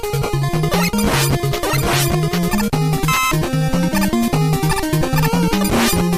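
From 4.11 to 4.31 s a burst of short noise blips sits on top of the sound, lasting about a fifth of a second. This is DAB burbling. Weak reception let a low rate of bit errors, roughly one or two bits per thousand, slip past error correction into the MP2 stream. Corrupted samples put short blips of noise in single sub-bands, and about nine frames were hit.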